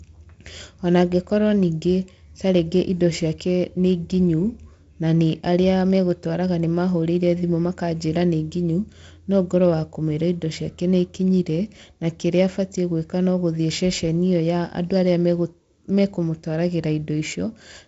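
No faults can be heard anywhere in this speech.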